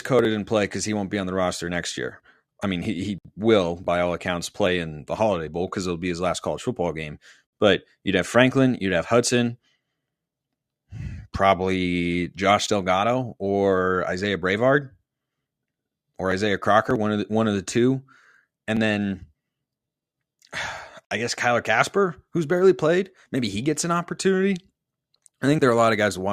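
No technical faults can be heard in this speech recording.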